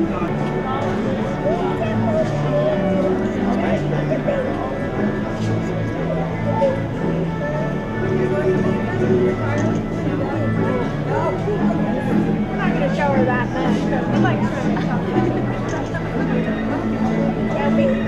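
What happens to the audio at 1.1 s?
Nothing goes wrong at 1.1 s; the audio runs through that moment intact, with no dropout, click or distortion.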